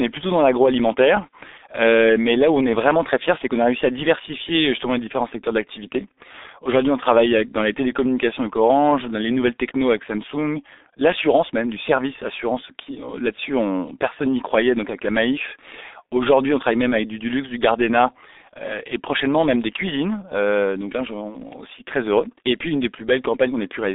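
Throughout, the speech sounds muffled and hoarse, with smeared consonants and nothing above 3.8 kHz: heavy G.723.1 codec damage, consistent with a very low bitrate around 6 kbit/s.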